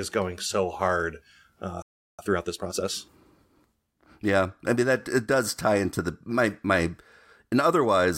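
The player most likely ran dry of buffered data, or its output thread was held up, so a playback stall cuts the speech at 1.82 s, just after "going so hard uh". The output drops to silence for about 0.37 s, a clear gap in mid-flow, and the speech resumes at 2.19 s. Because the player kept receiving audio through the gap, it came back with a backlog to clear.

To work that backlog off, the player applied time-compressed catch-up from 2.19 to 2.91 s, trimming short slices out of the signal and cross-fading the joins to run at 1.5 times normal speed. The speech in that stretch sounds rushed while keeping its normal pitch until real-time playback returns at 2.91 s.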